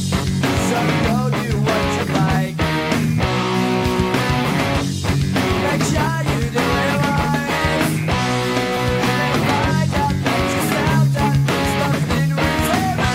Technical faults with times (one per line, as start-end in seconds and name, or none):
0.76-12.77 clock drift buffer slips